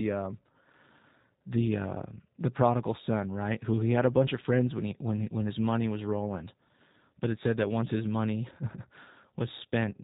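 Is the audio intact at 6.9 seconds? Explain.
No. The G.729 codec is at work at 6.9 s, as it is across the whole clip. This low-rate coding, consistent with about 8 kbit/s, discards the speech waveform and resynthesises it from a vocal-tract filter, a pitch predictor and a few pulses per short frame, with everything above 4 kHz removed. The speech at that moment is muffled, lacking its upper sibilance, and has a plainly audible rough, buzzy, synthetic quality.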